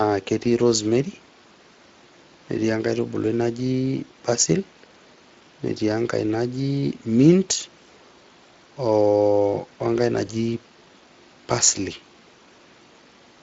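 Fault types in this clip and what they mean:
Speex codec: The whole clip runs through this old CELP speech codec, and the damage is plainly audible on the speech. The sound points to a mid-to-high setting somewhere near 20 kbps.
VoIP packet loss concealed by the speech codec: Around 10.27 to 10.33 s the speech briefly smears into a stretched, fading sound. The decoder filled a gap about 20 ms long, which fits one lost frame, by extending its last pitch and filter and lowering the gain, and the sound stays weak or distorted for a moment after the gap.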